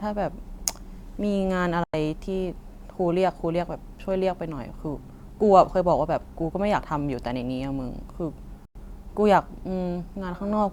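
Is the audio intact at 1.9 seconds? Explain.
No. A digital broadcast dropout mutes the speech from 1.84 to 1.94 s: after a 3 ms fade, about 96 ms is lost to silence, which fits roughly three failed frames. Unlike a skip or concealment glitch, nothing is smeared or repeated; there is a clean hole, then the speech resumes further on.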